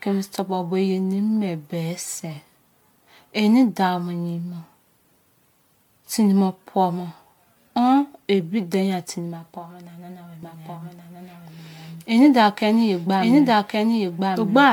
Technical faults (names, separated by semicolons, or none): generation loss; doubled audio track